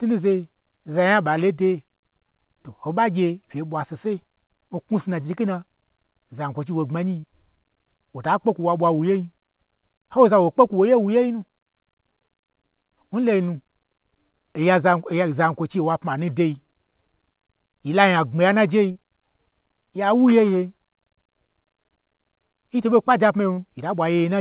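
Speech with short concealed packet loss at 7.20–7.25 s, 18.91–18.97 s after "nya gbmi yan najei", and 23.53–23.59 s after "nyi to ɓo kpaje". Each time about 40 ms of audio never arrived and the decoder stretched the preceding sound over the gap. That leaves a brief smear or wobble, not the silent hole of an unconcealed dropout. The call codec's band limit, with nothing above 4 kHz, fits G.711 mu-law.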